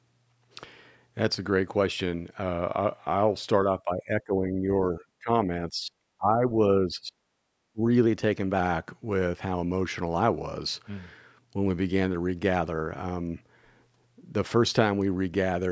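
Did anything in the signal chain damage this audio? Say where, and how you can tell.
Yes, two spots. First, the buffer/clock stage: from 2.42 to 3.63 s the speech slows by about 5.9% and the pitch sinks roughly a semitone (about 105 cents), then snaps back. From 8.06 to 8.59 s it goes the other way, about 5.9% faster and roughly 99 cents sharp. Speed and pitch move together in single steps, which points to a drift correction step, likely a clock-matching resampler refilling and then draining its buffer.

Second, the call processing: there's a run of dips at 3.85–4.68, 4.94–5.29, 5.69–5.94, 6.18–6.53, 6.86–7.20 and 7.73–7.82 s. The level drops by somewhere around 15 dB at first and as much as 30 dB by the later ones. That's speech suppressed in double talk: likely the echo canceller couldn't separate the near talker from loudspeaker echo while the far side spoke, so it pulled everything down.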